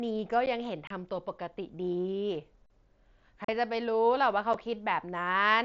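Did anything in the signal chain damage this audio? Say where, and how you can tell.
Yes. At 0.46 s and again from 2.66 to 2.70 s the speech briefly freezes: the waveform flattens and holds a level for about 10 ms and then 40 ms, with almost no click, and the speech resumes right where it paused. This is an underrun with held sample at the driver or buffer stage. The output buffer ran dry, the converter held its last value, and playback continued without skipping any audio, so the restart is soft.

The second fault is unconcealed Bluetooth headset packet loss on the wireless link. There are short holes with abrupt edges at 0.87 to 0.91 s (30 ms), 3.45 to 3.49 s (37.5 ms) and 4.53 s (7.5 ms). The lengths fit runs of 7.5 ms packets, roughly four, five and one, that were lost between headset and phone. Silence or an idle pattern replaced them with no concealment, so the gaps sound like hard chops within the mSBC wideband speech band that extends to 8 kHz.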